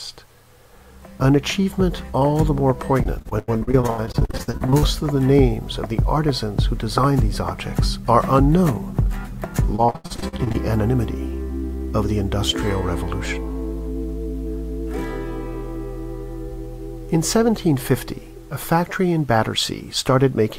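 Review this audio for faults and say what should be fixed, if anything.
Repeated packet loss (robotic sound) occurs from 3.03 to 4.84 s and again from 9.76 to 10.56 s. Audio data went missing over and over, and each hole was filled by stretching out the sound just before it. About two dozen short gaps, the longest 87 ms, are patched in the first stretch, and about a dozen, up to 81 ms, in the second. Concealment covers 37% and 45% of those spans, giving a choppy, robotic texture. To prevent it, stabilise the network path and use a larger jitter buffer or forward error correction so that lost packets are recovered rather than patched over.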